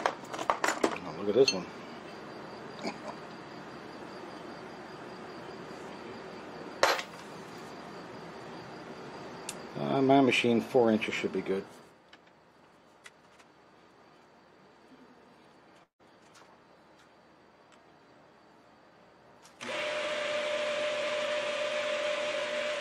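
At 15.83 s the sound cuts out until 16.01 s. The last sound carries on as a fading buzz, then about 120 ms of silence follows. When the audio resumes, about 160 ms is gone. This is likely a long network dropout.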